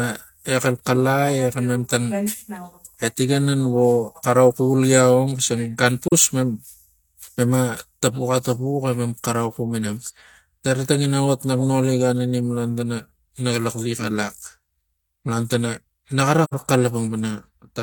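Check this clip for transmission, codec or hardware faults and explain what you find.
The clip has a codec transmission fault: AAC frame loss with muting, in two places. At 6.08–6.13 s, just after "gia ong xisang gan", about 43 ms of the speech drops out, which fits one lost frame. At 16.44–16.54 s a longer hole of about 85 ms points to two consecutive frames. The decoder zeroed the missing spectra, and the overlapping transform windows fade the sound down and back up, so the single lost frame is a brief dip and the two-frame run a soft-edged hole.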